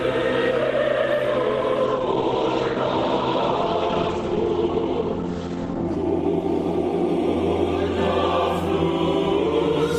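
From 1.84 s to 7.64 s the sound turns muffled and rough, losing everything above 8 kHz, worst for about four seconds. This call bitrate drop starved the encoder of bits, consistent with a fall from about 32 to 14 kbps.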